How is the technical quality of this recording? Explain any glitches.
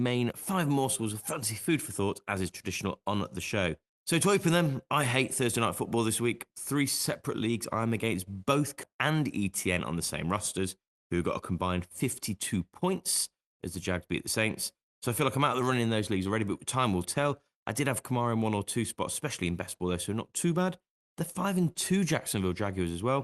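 Two glitches, both around the nine-second mark and both coming from how the call delivered and buffered the audio. The speech itself comes through a call codec with the top end cut off around 12 kHz, which fits an Opus stream at roughly 32 kbps.

The skip ahead hits at 8.83 s, right after "leagues I'm against both". Somewhere around 0.4 s of speech was dropped, either lost in transit or thrown out when the jitter buffer overflowed while newer audio was already queued. Playback just jumps straight to that later audio with essentially no gap. You hear the speech lurch forward, with the two sides spliced almost directly together, so a chunk of the sentence simply isn't there.

Right after that comes a jitter buffer speed-up from 8.93 to 11.52 s. The buffer was still holding more audio than it wanted, so the receiver kept snipping out tiny slices of one or a few pitch periods, back to back, to claw the delay down. 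In total it removed around 150 ms, running the speech at about 106% speed. Pitch stays put, but that stretch sounds a little rushed, like the talker briefly hurried.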